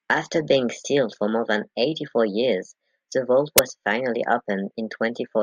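At 3.58 s the speech is cut by an uninitialised buffer: a single block lasting roughly 11 ms was sent to the output before any audio had been written into it, so whatever data remained in that memory was played as samples. The result is a short, loud burst of harsh digital noise with no relation to the surrounding speech. Its length fits a 512-sample buffer.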